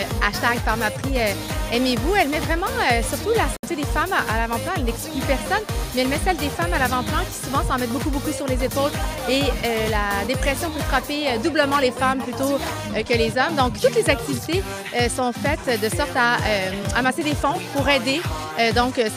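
A digital broadcast dropout cuts the audio from 3.56 to 3.64 s: the sound fades out in about 3 ms and goes silent for roughly 64 ms. The receiver likely muted on corrupted frames, and the gap fits two lost frames.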